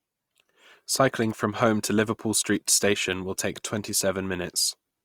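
A single sharp tick at 1.31 s and another at 3.13 s are bit error spikes. Each time one flipped bit knocked a lone sample off by a power of two before it snapped back. The result is a broadband tick with no link to the speech, shorter and cleaner than a dropout or a clipping burst.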